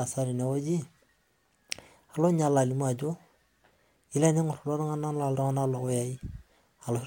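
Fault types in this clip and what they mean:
No fault types are present in this clip.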